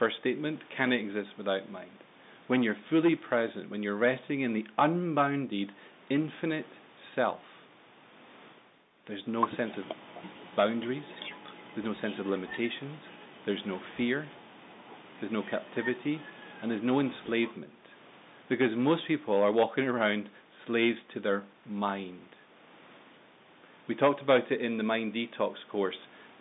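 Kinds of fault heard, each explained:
No faults detected here.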